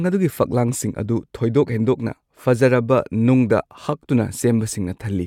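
Nothing in the speech stood out as a technical fault on listening.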